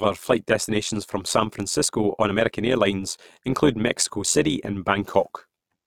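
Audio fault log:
Throughout, overlap-add ripple: the speech carries a metallic buzz with extra tones around the voice, from a ripple at around 100 Hz. It was split into windowed frames and rejoined with overlaps that do not sum to a steady gain, so the level swings by about 11 dB once per frame.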